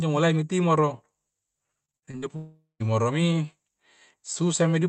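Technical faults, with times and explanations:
1.85–2.24 s, repeated packet loss (robotic sound): Half a dozen short holes land close together, the longest about 50 ms. Each one gets patched by stretching the last bit of sound, so nearly half this stretch is filler. That's what gives it the choppy edge, with pieces missing.
2.36–2.82 s, long network dropout: About 440 ms of audio just goes missing. First you get a fading buzzy continuation of the last sound, then roughly the final 150 ms is near-silence before things pick up again, with that chunk gone for good. A likely network outage.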